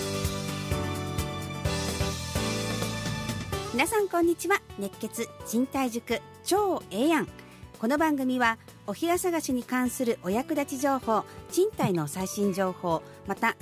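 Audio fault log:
No fault turns up anywhere in the audio. Nothing in it breaks, drops out or changes in a way that calls for a note.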